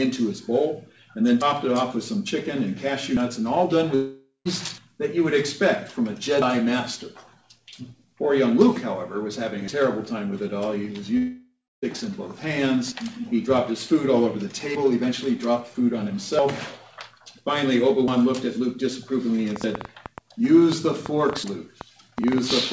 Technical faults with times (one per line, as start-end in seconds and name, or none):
3.95-4.48 long network dropout
11.17-11.85 long network dropout
19.56-22.73 train of clicks